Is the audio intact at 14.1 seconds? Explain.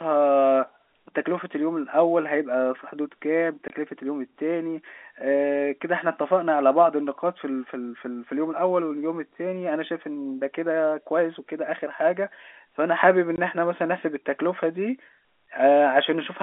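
Yes, the audio is intact at 14.1 seconds, with the speech carried cleanly through the narrow telephone band of G.711 coding and no fault at that moment.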